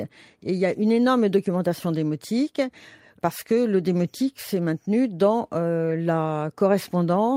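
No technical faults can be heard anywhere in this recording.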